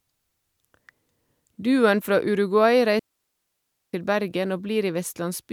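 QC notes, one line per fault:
2.99–3.93 s, digital wireless dropout: the speech vanishes into a clean, near-silent gap of about 0.94 s with no noise burst, as the receiver mutes after losing too much data.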